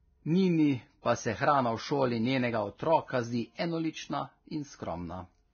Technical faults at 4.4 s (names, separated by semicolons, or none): Vorbis compression